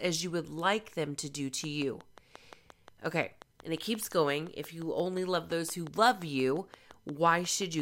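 It's a speech recording, and from about 1.64 s, right after "them to do to", a train of clicks starts and runs to 7.80 s, nearly the end. The clicks are evenly spaced at about 5.7 per second, roughly forty in all, and they poke out a few decibels above the speech, so you hear a steady ticking in the pauses as well. It's likely interference from nearby equipment or a faulty connection or power supply.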